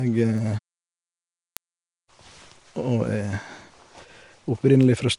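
From the start the speech is rough and hissy, with a smeared, underwater quality and nothing above 10.6 kHz. This is likely Nellymoser compression: coarse fixed-rate block coding that leaves weak bands as filled-in noise, consistent with a bitrate near 44 kbps.

From 0.38 s to 5.13 s, word clock ticks sound as sharp clicks of uneven strength, steadily about every 0.3 s, around fifteen in all. An unlocked receiving clock slips against the sender by tens of ppm, dropping or repeating one sample at each slip.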